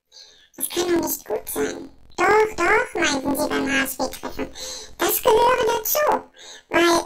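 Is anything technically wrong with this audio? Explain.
Yes. Throughout, planar audio is read as interleaved. Each 23.2 ms block, which fits a 1024-sample buffer, holds all left samples and then all right ones, but is read as alternating pairs. So each block plays twice at double speed, pitching the sound an octave up with a 43.1 Hz flutter.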